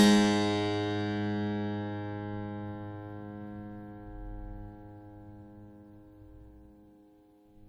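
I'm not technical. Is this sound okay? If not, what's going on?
No. All the way through, this music sounds swirly and hollow, as if heard through a watery tube, and the start of each note is soft and smeared instead of crisp. That points to generation loss, most likely from the track being saved as an MP3, opened and saved again around seven times. Each save throws away a little more detail in slightly different places, and those small losses pile up into this washed-out, blurry sound.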